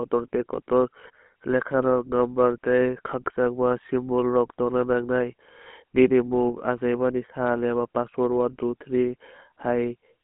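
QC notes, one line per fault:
throughout: GSM full-rate codec, plainly audible buzzy, gravelly roughness from pulse-driven vocal-tract modelling, band limited to 200 Hz–3.4 kHz; consistent with 13 kbps GSM.
0.56–0.62 s: lost GSM frames. About 20 ms of signal, fitting one lost frame, is replaced by the previous frame's parameters, giving a brief rough, metallic ring.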